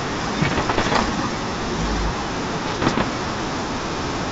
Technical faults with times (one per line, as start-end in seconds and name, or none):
0.41-1.09 bit errors on an ADPCM link
2.66-3.03 bit errors on an ADPCM link